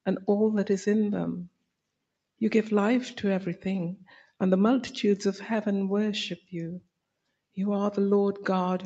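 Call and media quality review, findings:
Noise suppressor applied to music or sounds, whole clip. Held material and decays ride up and down by around 5 dB, so the sound flutters and thins while onsets pass intact. Probable component: speech-tuned suppressor left enabled, misreading steady tones and ambience as noise. Unlike a codec artefact or dropout, level breathes continuously with signal steadiness and leaves no gaps or smearing. Top end stops near 8 kHz, consistent with the call codec's bandwidth, not the suppressor.

Sound cut by the noise suppressor at 1.46–1.72 s, deepest drop about 22 dB. Sustained part sinks sharply, attack survives.

Same at 4.02–4.31 s, shallower, about 11 dB.

Same at 6.8–7.57 s, about 22 dB at worst, roughly 0.3 s of it audibly ducked. Probable component: suppressor gain clamping on steady or fading content. Unlike packet loss, there is no click, silence or concealment buzz. 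The level just sinks smoothly and recovers.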